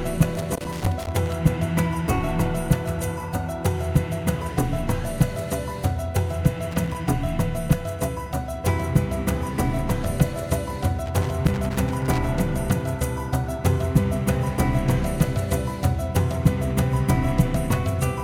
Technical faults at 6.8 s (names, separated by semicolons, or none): loose connector crackle